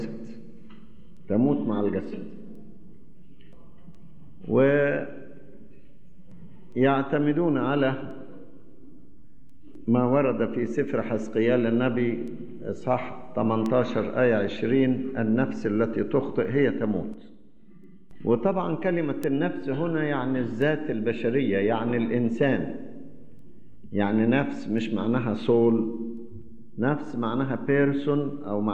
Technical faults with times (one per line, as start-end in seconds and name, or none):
1.17-27.56 word clock ticks